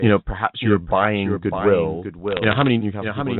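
A speech clip carried over a G.711 A-law telephone channel, so nothing above 4 kHz is present. Throughout, a doubled audio track runs under the speech: a second, full-band copy trails the original by roughly 0.7 s at around 10 dB lower, with no reverberant tail or room colouring, which separates it from an echo. It most likely comes from the same signal being captured again through a slower path or from two misaligned copies left in an edit. Between 2.28 and 2.68 s, bit errors on the digital phone line produce a burst of sharp ticks and crackle on top of otherwise intact speech. Each flipped bit corrupts a single sample, and hits on the sign or upper bits of the logarithmic 8-bit code give the loudest clicks. The density points to an error rate of a small fraction of a percent, spread across many consecutive frames.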